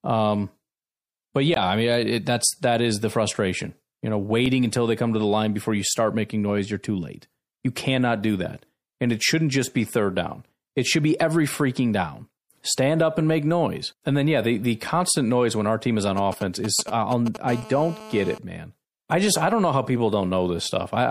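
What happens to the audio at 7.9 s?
At 7.9 s the speech carries the watery, swirly smear heard across the whole clip, likely MP3 compression at a rate fitting 64 kbps; a spectrogram shows flickering high-frequency holes.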